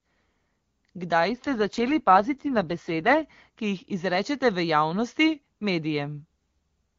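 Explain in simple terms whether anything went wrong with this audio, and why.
From 1.3 to 3.24 s the speech turns rough and robotic, then clears. This is an AMR rate drop: a weak phone signal forced lower-quality coding.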